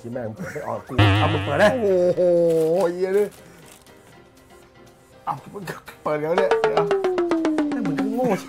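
No faults can be heard.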